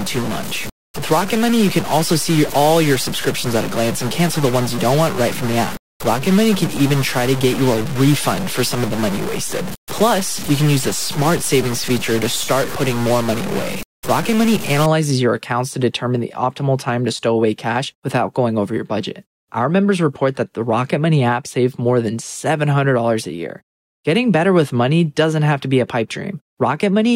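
Stuck bit from 0.0 to 14.86 s: harsh, buzzy distortion, with quiet gaps filled by noise about -20 dBFS, likely from one sample bit held fixed.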